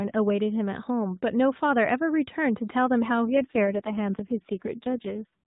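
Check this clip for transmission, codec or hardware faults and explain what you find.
One transmission fault is present, an AMR rate drop, over narrowband AMR mobile speech. From 3.27 to 5.43 s, the voice turns rougher and more synthetic. The network cut the codec's rate, fitting 12.2 to 4.75 kbps, with no gap.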